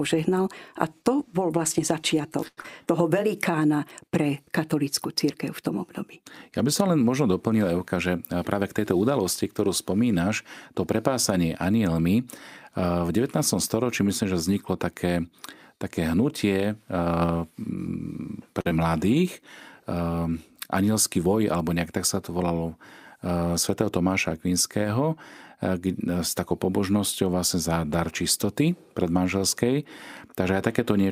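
Right after "to bol vlastne začiatok", from 2.47 to 2.59 s, there is a short stall from a late packet. A packet arrived late and the jitter buffer ran dry. The receiver held the last sound for about 98 ms until the data came in. Then it picked up where it left off. Nothing is lost. The sound is simply drawn out, with a faint buzzy sustain.

A skip ahead follows at 2.61 to 2.66 s. The buffer now held too much after the late arrival, so a stretch was thrown away. Roughly 70 ms of speech is gone. Playback leaps forward, and the two sides are joined almost seamlessly.

From 2.86 to 3.52 s comes a jitter buffer slow-down. The receiver was rebuilding its reserve. It repeated single pitch periods over and over and added 58 ms in total. Speech runs at 92% speed. The pitch stays the same. Sounds are stretched and a little sluggish.

A jitter buffer speed-up runs from 8.07 to 9.19 s, just before "ktorú spomínaš to prepásanie". 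Too much audio had piled up in the buffer. The receiver trimmed tiny pieces of pitch periods in a row, about a tenth of a second in all. Speech plays at 109% speed at unchanged pitch. It sounds slightly rushed.

At 18.61 to 18.67 s there is a second short stall from a late packet. It is smaller than the first. About 39 ms of held sound covers the wait, and nothing is skipped. It is a brief, slightly frozen moment.

At 18.69 to 18.73 s comes short concealed packet loss. About 20 ms of audio never arrived. The decoder filled the gap by carrying the previous sound forward, then blended back into real audio. It is heard as a tiny smear or wobble right after the stall.

The last fault is another jitter buffer speed-up, from 21.17 to 21.56 s, just before "nejak tak sa to". Speech runs at 111% speed. Roughly 50 ms is removed in small slices to cut the delay. The pitch holds, but the phrase sounds hurried.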